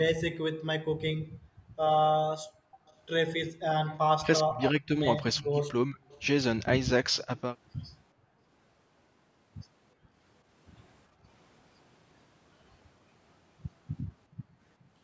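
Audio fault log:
1.24–2.85 s, 8.13–8.43 s, 9.95–11.25 s and 14.37–14.49 s: background gated by the echo canceller. While the far end plays, the canceller clamps the microphone, so room tone drops away. The deepest drop is about 40 dB in the first window and about 22 to 24 dB later. On a spectrogram the noise floor shows dark vertical gaps, and the waveform's quiet baseline thins out abruptly.
2.86–7.41 s and 14.12–14.89 s: echo leak. A faint delayed copy of the far-end sound, 413 ms late and roughly 30 to 35 dB below the speech, comes back, likely because the canceller left some loudspeaker pickup unremoved. A spectrogram shows weak, smeared repeats of earlier harmonic patterns trailing the originals.
4.19–7.29 s: speech suppressed in double talk. With both sides active, the talker's voice dips by around 25 dB and breaks up for roughly a second in total, likely because the canceller treated it as echo. 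The waveform shows chopped, shrunken envelopes, and the spectrogram loses upper harmonics in patches.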